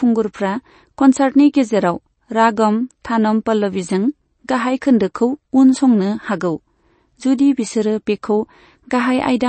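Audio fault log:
throughout, MP3 compression: treble stops at 8.3 kHz and weak detail flickers between frames, giving plainly audible watery, swirly speech; likely a low bitrate, which fits about 32 kbps.
5.14 s, pre-echo: a short hiss spreads about 11 ms ahead of a sharp attack, because the block's quantisation noise fills the quiet moment before it, softening the onset.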